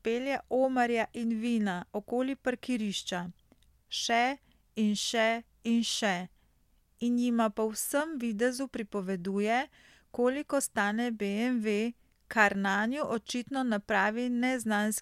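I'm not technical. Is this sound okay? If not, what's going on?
Yes, this sound is okay; nothing is going wrong in it.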